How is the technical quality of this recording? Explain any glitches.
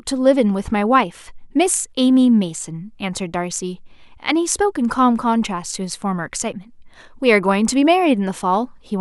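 Nothing in the technical quality of this speech recording stood out as a problem on listening.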